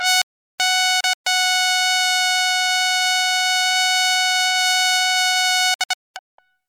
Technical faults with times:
0.22-0.60 audio dropout to silence
1.00-1.27 digital broadcast dropout
5.74-6.39 digital broadcast dropout

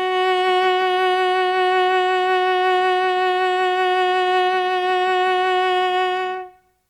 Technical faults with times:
none

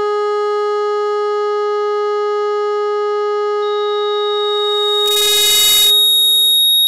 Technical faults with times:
3.62-6.87 loudspeaker feedback squeal
5.06-5.90 integer overflow

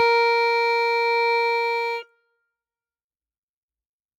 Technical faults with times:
0.00-4.18 noise suppressor applied to music or sounds
1.74-2.37 sound cut by the noise suppressor

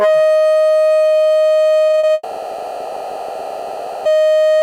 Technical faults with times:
1.87-2.11 repeated packet loss (robotic sound)
2.13-4.07 long network dropout

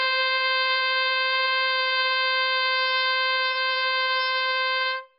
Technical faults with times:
0.00-5.19 AAC compression

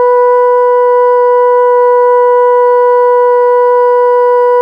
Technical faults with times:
none

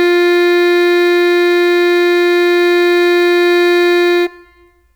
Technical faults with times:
0.00-4.96 sample clock jitter

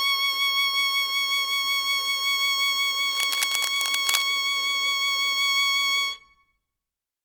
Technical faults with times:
3.09-4.26 cable scratch noise

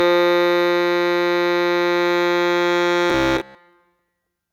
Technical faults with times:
3.10-3.55 robotic sound from repeated short buffers

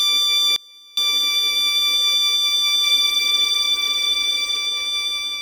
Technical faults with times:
0.00-5.42 MP3 compression
0.56-0.97 audio dropout to a faint residue
2.85-4.57 doubled audio track

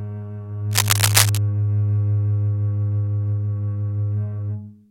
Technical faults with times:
0.71-1.38 cable scratch noise

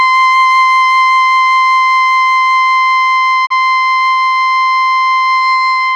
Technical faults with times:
3.45-3.52 digital broadcast dropout

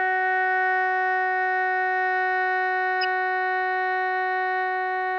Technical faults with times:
3.01-3.05 corrupt frame decoded

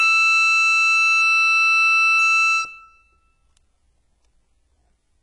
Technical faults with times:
0.00-5.22 HE-AAC compression

